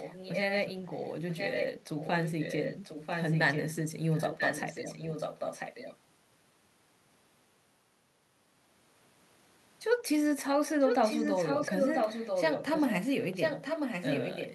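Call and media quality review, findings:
Echo leak: delayed copy of the speech trailing the talker by 992 ms, in scraps and longer stretches at 0.00–0.72, 0.92–1.12, 1.30–1.70, 1.97–3.75, 4.12–5.97, 10.80–12.96 and 13.20–14.54 s. Mostly a little below the direct speech, about as loud at 10.80–12.96 s, very faint at 0.92–1.12 s. Likely a far-end loudspeaker path where the echo canceller lets residual microphone pickup return up the line.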